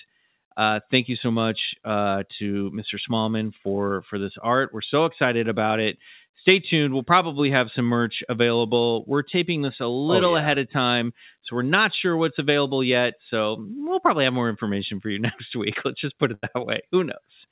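A burst of packet loss at 16.34 to 16.46 s in this speech, right after "just put": lost packets left a gap the receiver concealed by stretching the last sound for about 85 ms, then speech resumes with roughly 90 ms of speech lost, over a call path whose codec leaves nothing above 4 kHz.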